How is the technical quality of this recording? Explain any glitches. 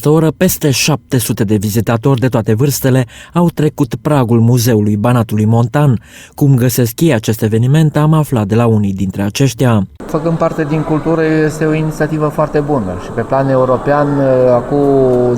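Nothing in the recording stood out as a technical problem on listening, and there are no glitches to explain.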